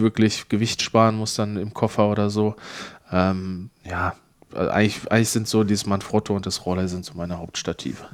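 Nothing goes wrong anywhere in this speech recording, so there's no fault to point to at any moment.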